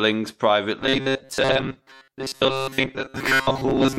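Robotic sound from repeated short buffers runs from 0.8 s to the end of the clip. From that point the speech turns into a rigid, metallic buzz at about 134 Hz that only loosely tracks the words. The likely cause is that new audio was arriving too seldom, so playback kept repeating a short stretch of about 7.5 ms in place of the audio it skipped. Those repeats make up most of the sound.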